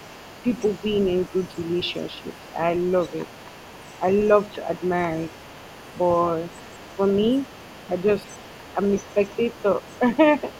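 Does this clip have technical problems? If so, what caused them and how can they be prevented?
Yes. Throughout the clip, from 0 to 10.6 s, the other side's voice leaks through at roughly 25 dB below the main speech, likely because the talker's loudspeaker played the far end back into a microphone whose echo canceller left a residue. A spectrogram shows faint harmonic traces inside the pauses. Using a headset, or lowering the loudspeaker volume and moving it away from the microphone, would prevent it.

Between 9.14 and 9.38 s, speech is suppressed in double talk. The talker's level dips by roughly 5 dB, totalling about a tenth of a second, likely because the echo canceller mistook overlapping speech for echo. The waveform envelope shows small notches, and the spectrogram shows brief dimmed patches. Better double-talk detection, or the same headset, would prevent it.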